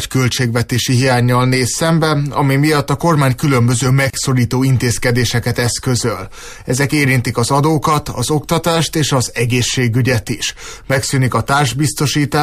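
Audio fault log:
4.10–4.14 s, gap at a join of encoded pieces: a 34 ms gap, its edges smeared so the silent part is shorter, from untrimmed encoder delay and end padding where separate pieces meet.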